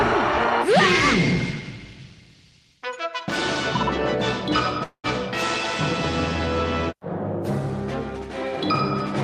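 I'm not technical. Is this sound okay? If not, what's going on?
No. At 4.83 s the sound stalls for about a fifth of a second: the last bit smears into a fading buzz, drops to silence, then carries on at 5.06 s with nothing lost. That's a call audio freeze, likely from network data arriving late.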